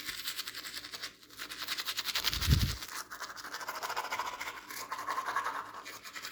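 Frames out of order, 5.83 to 6.02 s: two adjacent runs of coded audio were decoded in swapped sequence, so this short stretch plays with its halves exchanged. It sounds like a garbled flutter. Each block lasts about 80 ms, which points to four frames per run.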